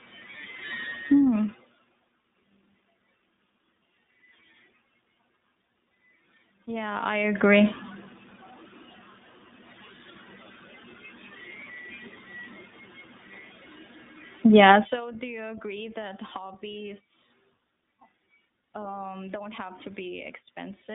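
From start to end, the speech carries iLBC codec damage. Each 20 ms frame is coded on its own, leaving a rough, synthetic edge. The band runs from about 150 Hz to 3.7 kHz, with nothing above 3.8 kHz, which fits the 15.2 kbps mode.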